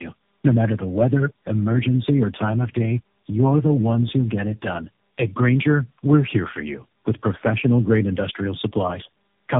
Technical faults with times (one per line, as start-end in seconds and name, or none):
0.00-9.60 tandem speech coding